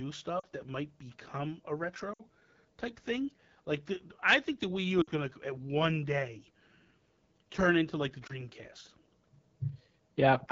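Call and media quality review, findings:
AMR wideband (HD Voice) codec, whole clip: rough, raspy texture with a noise-filled top end above 6.4 kHz. That roughness fits the low 8.85 kbit/s mode, where the pulse-excited vocal tract model is starved of bits and plainly audible damage results.

Lost AMR speech frames at 0.40–0.46 s, 2.13–2.23 s, 5.01–5.11 s and 8.27–8.46 s: short dips or warbles, dropping to near silence within two frames in the longer runs, then a weak, rough restart. The decoder is reusing the last good pitch and vocal tract settings with falling gain. The gaps run about 20–60 ms, which fits one to three dropped frames.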